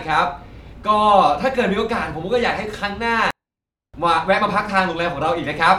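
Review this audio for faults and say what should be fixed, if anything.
From 3.31 to 3.94 s the speech drops about 48 dB and nearly vanishes, though it stays clean. This is a 24-bit alignment error (too quiet). Samples sitting in the low 24 bits of a 32-bit word were read as full 32-bit integers. To prevent it, shift 24-bit samples into the top bytes, or declare the format correctly before reading.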